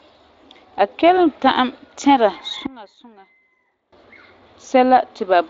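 At 2.66 s the speech and its background noise drop together by about 22 dB in one step, then snap back at 3.92 s. That's a sudden gain jump, likely a gain change applied with no ramp. The Speex band, topping out near 7.6 kHz, carries straight through.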